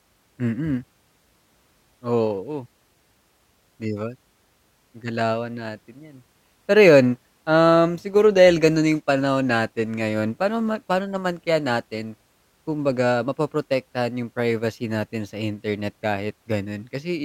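No technical faults are audible anywhere in the recording.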